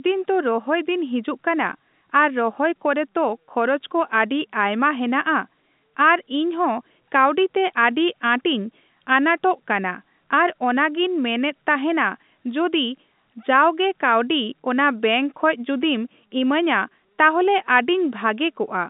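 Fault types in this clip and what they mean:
No faults can be heard anywhere in the clip. The speech comes through G.711 telephone coding, which confines it to the line band of roughly 150 Hz to 3.7 kHz with nothing above 3.8 kHz, and any coding noise it adds stays faint at most.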